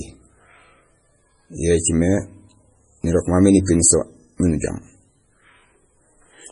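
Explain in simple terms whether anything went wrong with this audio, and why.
Throughout the speech, the sound is dull, watery and swirly, with nothing above 10.5 kHz. That is likely heavy MP3 compression: short of data, the encoder cut off the treble and dropped faint detail, which flickers in and out from moment to moment.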